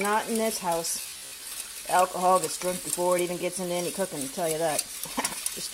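From 1.02 s to 1.51 s the sound takes on a robotic quality from repeated short buffers: a rigid, metallic buzz near 66.7 Hz, while its rough contour still comes through. The likely cause is audio arriving too slowly, so the playback side keeps reusing a fragment of about 15 ms, which matches the buzz period, to fill the gaps. Roughly half of the audio in this stretch is such repetition, with the corresponding original material skipped.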